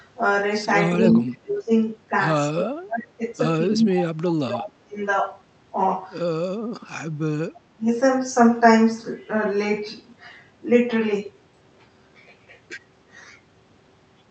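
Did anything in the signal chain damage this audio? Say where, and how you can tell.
Yes. The call processing stage damaged the speech: there are four dips, at 0.94–1.72 s, 2.49–3.22 s, 3.69–4.99 s and 7.53–7.89 s, dropping roughly 20 to 25 dB. This fits speech suppressed in double talk, where the echo canceller likely mistook the talker for echo and attenuated both. On a waveform the envelope caves in at those times.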